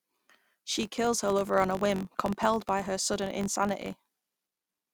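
A filter restarted on every block runs through the whole of this speech clip. Instead of carrying its memory from one block to the next, the filter starts each block from silence, so every block boundary opens with a small transient. Those ticks arrive at 46.9 Hz, which fits a 1024-sample block, and they merge into a low buzz that rises and falls with the speech level, swelling on loud passages and fading in the pauses.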